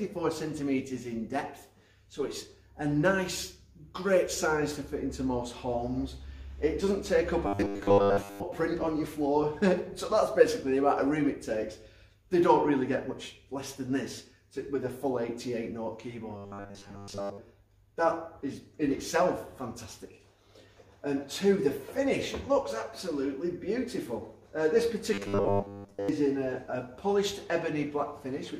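Robotic sound from repeated short buffers appears three times, at 7.47 to 8.43 s, 16.37 to 17.38 s and 25.14 to 26.09 s. Each lasts about a second and carries a rigid 100 Hz buzz, which fits a 10 ms chunk being replayed over and over. Fresh audio is likely arriving too slowly, so the last fragment is looped in place of most of the real signal, leaving a metallic drone that only loosely tracks the sound underneath.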